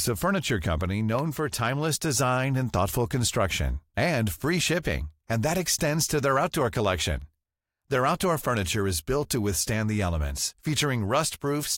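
Just after "a furniture company", at 1.19 s, periodic USB or driver dropouts begin and recur every 2.0 s through 11.23 s, about seven in all. Each time, the USB or audio driver path stalls and a tiny fraction of a millisecond of audio is replaced with silence, producing a tick. What separates these from random clicks or codec glitches is their strict 2.0 s spacing, which points to a background task blocking the bus on a timer.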